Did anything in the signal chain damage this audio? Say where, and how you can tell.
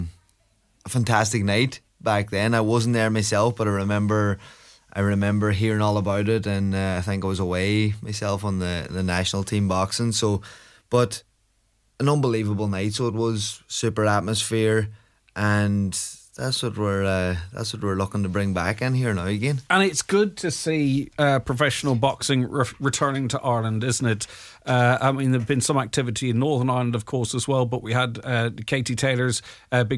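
Yes. A resampler restarted on every block, from 23.95 to 26.2 s: a steady 20 Hz ticking rides on the sound, one tick for each 50 ms block, from edge errors in rate conversion.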